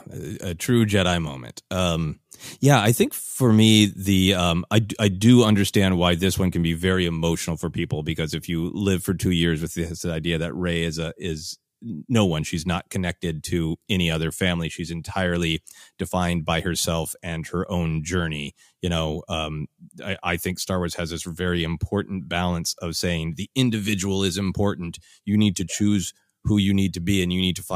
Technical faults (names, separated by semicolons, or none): none